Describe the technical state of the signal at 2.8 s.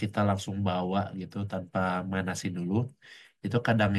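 At 2.8 s the speech signal is intact, with no audible technical fault at that moment.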